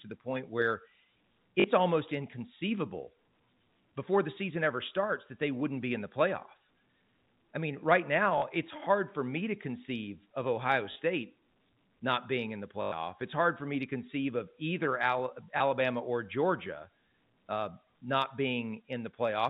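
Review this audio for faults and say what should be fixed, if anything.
Five short dropouts in the speech are concealed by packet loss with last packet repeated. They fall at 1.60–1.64 s, just before "almost inconceivable"; 8.38–8.42 s, between "I mean right" and "it's hard for me"; 10.92–10.96 s; 12.82–12.92 s, after "not being in the"; and 15.58 s. Each gap is refilled by looping the previous segment. The lengths (20, 40 and 100 ms) fit 20 ms packets, so the longest run buzzes at about 50 Hz as a brief robotic stutter. The band-limited G.711 telephone coding around these events gives the usual narrowband sound. Preventing this needs a larger jitter buffer or forward error correction on the network path, plus a pitch-synchronous concealment algorithm in place of plain packet repetition.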